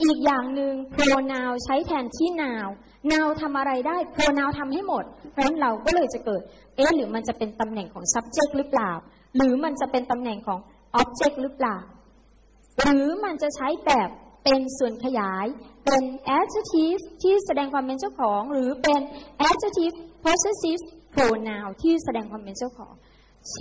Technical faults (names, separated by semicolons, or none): none